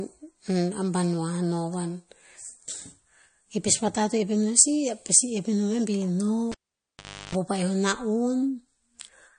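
Speech, and the whole clip carries plainly audible MP3 compression damage: nothing survives above 9.6 kHz, and the sound has that watery, swirly edge where weak frequency detail flickers in and out, which fits a starved encoder at something like 40 kbps as the likely cause. Then there's a cable pulled and plugged in from 6.52 to 7.35 s: a pop, roughly 0.8 s of dropout, about a third of a second of 50 Hz mains buzz while the plug half-connects, and a second pop as the sound comes back.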